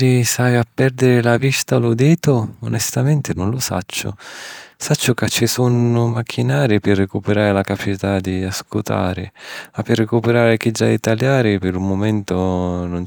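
A speech recording in which no technical fault can be heard at any point.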